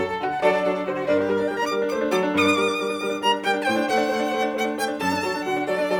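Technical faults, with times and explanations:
No technical faults are audible in this music clip.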